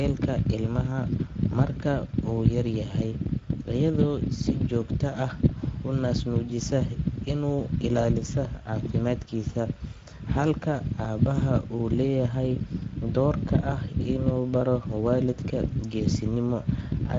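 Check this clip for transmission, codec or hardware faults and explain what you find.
The clip carries one fault, present from start to finish.

Speex codec, throughout: this CELP coder rebuilds the speech from a filter and a sparse excitation, and the hoarse, plainly noisy quality here fits a rate near 16.8 kbps. Nothing survives above 7.7 kHz, and the top band sounds like shaped noise rather than detail.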